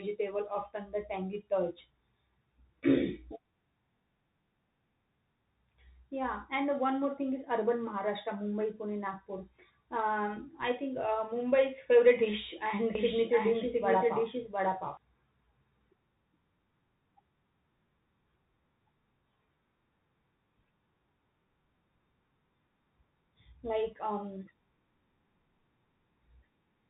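From the start to the end, the speech carries the damage of a Bluetooth CVSD headset codec, which fits a 64 kbps CVSD link. Nothing above 3.8 kHz survives. The one-bit delta coding cannot track fast, loud high content, so sibilants turn scratchy over a steady granular hiss.

From 12.95 to 14.97 s, a doubled audio track appears: a full-band copy of the speech trails about 0.7 s behind, roughly as loud as the original, with no reverberant tail, starting and stopping abruptly. The likely cause is a second, slower capture path mixed in.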